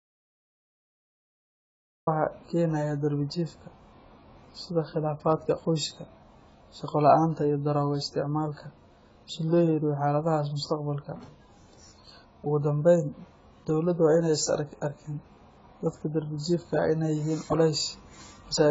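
From the very start until 2.07 s the recording is already in an audio dropout to silence, with no room tone. The input was likely lost while the recorder kept writing. Speech resumes abruptly at "keenaya darbi". The waveform is a flat line, and the spectrogram is empty.

Throughout, the speech has a heavily damaged, dull and smeared quality, with a warbling, fizzy texture on sibilants and sustained sounds. This is most likely AAC compression at a bitrate that fits about 16 kbps. The spectrogram shows a hard ceiling with nothing above 7.6 kHz.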